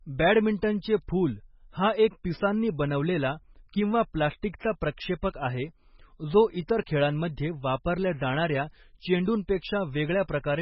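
MP3 compression, likely the cause of the damage heard throughout the speech, is audible from start to finish. Nothing is present above 5.5 kHz, because the encoder, short of bits, cuts the treble off at a fixed point. Weak frequency lines drop in and out from one frame to the next, giving the sound a watery, swirling texture and metallic chirps on sibilants. The degree of damage fits a very low bitrate of around 16 kbps.

Pre-echo occurs at 4.42 s, between "एक पिसांनी बनवलेला किंवा" and "प्रक्षेपक आहे". A sharp onset lands late within a transform block. The codec spreads its quantisation noise evenly across that block, so noise sized for the loud attack also fills the quiet instant just before it. The result is a brief hiss of about 10 ms ahead of the onset, and the attack itself sounds softened and smeared.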